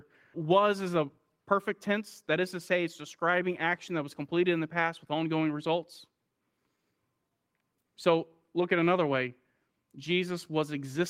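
Clock drift between sender and receiver runs through this speech recording: the sender's clock is slower than the receiver's by about 2 percent, so the receiver's jitter buffer keeps draining and has to be topped up rather than playing at a steady rate. The result is repeated timing corrections from 0.04 s to 10.71 s, with short pieces repeated at uneven intervals, all stretching the same way. Together they add roughly a fifth of a second, each correction small enough to pass as no more than a slight hiccup or an unsteady pace.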